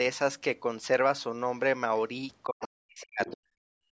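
At 1.97 to 2.01 s a faint scrap of a second voice, around 35 dB below the speech, slips in: the other side's voice leaking through, likely loudspeaker echo the canceller missed. From 2.45 to 3.31 s the talker's speech dips and breaks up, in places by as much as 40 dB. This is likely speech suppressed in double talk, with the canceller turning down both sides at once. During and just after that stretch the leakage comes back louder, at 3.0 to 3.05 s and again at 3.21 to 3.37 s, rising to roughly 15 dB below the speech. From 3.59 s to the end, the room sound falls away by about 33 dB. That is background gated by the echo canceller, which clamped the microphone while the loudspeaker played.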